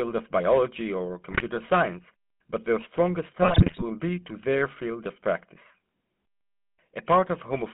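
The whole clip carries the sound of the GSM full-rate codec. The speech is buzzy and gravelly throughout. The band runs from about 200 Hz to 3.5 kHz, with nothing above. The codec models the vocal tract and excites it with sparse, regular pulses, so fine detail is lost. The damage is plainly audible and fits a 13 kbit/s GSM full-rate stream.

GSM bit errors strike twice. The first runs from 1.30 to 1.43 s, after "of biology or". The second runs from 3.42 to 3.83 s, after "science but their strongest" and before "be to their field". Corrupted filter, pitch or gain values reach the decoder, so the spectrum warps and the level jumps. The sound breaks into squawks and gargling. The first burst fits about six 20 ms frames and points to a higher error rate. The second is longer.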